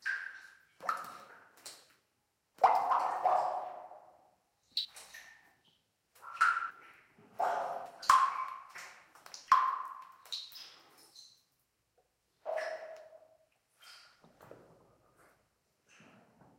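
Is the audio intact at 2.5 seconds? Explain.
No. At 2.54 s, compressed frames were skipped: a few whole frames went unplayed, either missing from the file or rejected by the decoder as damaged. The sound jumps ahead by about a tenth of a second, consistent with frames of around 32 ms.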